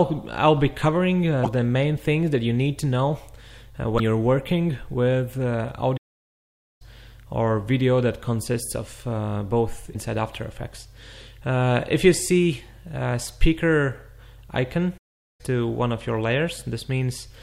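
Damaged data in a compressed stream shows up at 1.43 to 1.47 s, 3.96 to 4.00 s and 9.92 to 9.96 s. Each is a brief glitch of about 44 ms, where the decoder meets corrupted frames, loses sync and jumps ahead to the next frame header.

A playback stall at 5.97 to 6.82 s drops the sound into silence for 832 ms, and a second stall at 14.97 to 15.41 s lasts 415 ms. Both gaps likely come from the player running out of data or having its thread blocked.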